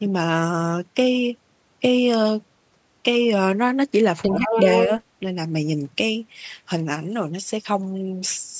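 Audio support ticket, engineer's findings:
Second voice under the talker, 4.23–4.89 s, roughly level with the main speech. Other side's voice leaking through; likely an echo canceller missing far-end loudspeaker pickup at the mic.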